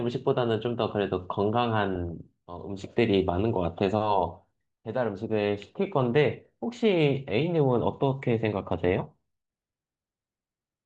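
From 1.95 to 2.11 s, DAB burbling: bit errors slipped past error correction, putting short blips of noise into single sub-bands, heard as brief noise blips and seen as scattered bright spectrogram blocks.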